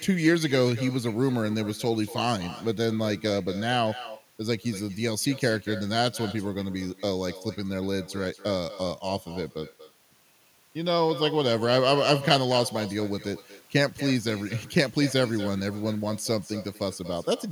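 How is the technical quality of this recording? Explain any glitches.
Every phrase of the speech is shadowed by a second, quieter copy of itself arriving about a fifth of a second later and sitting about 15 dB below the direct sound, for the whole clip. This is echo with no canceller: the far end plays the call through a loudspeaker, its microphone picks that playback up, and nothing subtracts it, so the talker's own voice returns after the network round trip.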